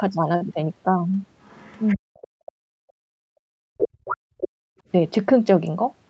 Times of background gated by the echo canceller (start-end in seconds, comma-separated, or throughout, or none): 2.43-3.50, 4.61-4.84